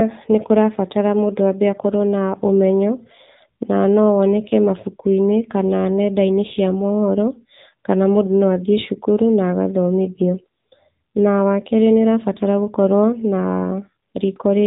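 It's a speech clip squeezed through the AMR narrowband mobile codec for its whole length. Nothing above roughly 3.8 kHz survives, so it's dull and phone-like, and the voice has a plainly buzzy, synthetic edge that fits a low AMR-NB mode around 7.4 kbps.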